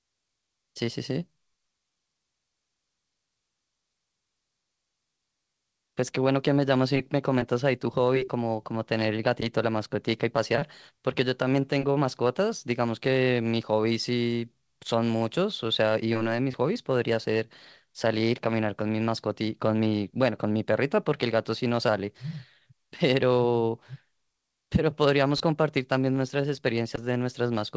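No technical faults can be heard in this speech recording.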